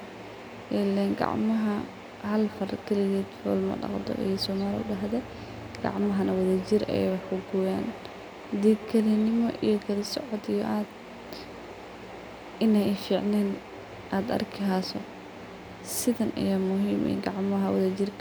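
From 2.48 s to 9.31 s the speech carries a feedback echo between two devices. Two devices in the same space are on one call, so one device's loudspeaker replays what the other's microphone sent, and that microphone captures it again. Each device's echo canceller only removes its own playback, so this path survives. Each phrase returns at a fixed interval of roughly 150 ms, thinner and ringing, peaking at about 19 dB below the speech.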